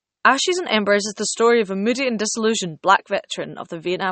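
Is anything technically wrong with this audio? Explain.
Yes. Low-bitrate audio saved at a high bitrate runs through the whole speech clip. Nothing is present above about 8.4 kHz, and the sound has the thin, smeared quality of heavy MP3 compression. The likely cause is an MP3 encoded at a very low rate, around 32 kbit/s, then re-saved at a far higher rate. The second pass enlarges the file but cannot rebuild the discarded treble or detail, so the first encoding's damage stays audible.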